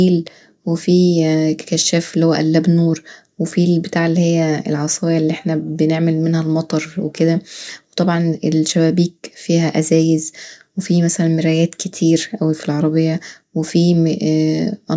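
A speech recording, and nothing is technically wrong with it.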